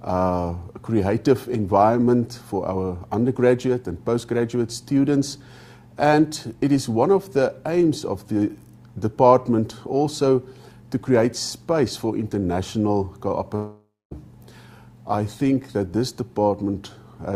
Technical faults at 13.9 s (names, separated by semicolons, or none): long network dropout